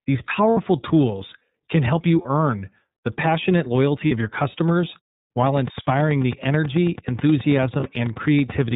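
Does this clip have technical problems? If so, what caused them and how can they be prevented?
Yes. Throughout, the speech sounds narrow, slightly rough and synthetic, with nothing above 4 kHz and plainly audible coding damage. This is the iLBC codec, and the character fits its 30 ms frame mode at 13.33 kbps, coding each frame's excitation independently within a narrowband channel. Using a wideband codec such as Opus would avoid this.

Brief held, buzzy vowel sounds replace the speech at 0.51–0.58 s (60 ms, just before "tools can help you"), 2.22–2.25 s, 4.08–4.12 s (between "the passionate" and "of your customers") and 7.80–7.83 s. These are lost iLBC frames: the decoder repeated the last pitch cycle with noise, and because frames stand alone, the voice recovers at once. A jitter buffer with forward error correction, or a more reliable network path, would prevent this.

From 5.47 s, right after "of your customers", to 8.72 s, a regular ticking of about thirty similar clicks runs at roughly 9.2 per second, peaking about 5 dB above the speech. 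This train of clicks likely comes from electrical interference or a faulty connection or power supply. Shielding cables, moving away from interfering equipment, or fixing the connection or power supply would prevent it.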